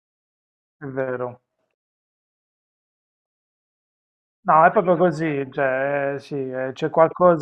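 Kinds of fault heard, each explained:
No audible faults in this speech recording.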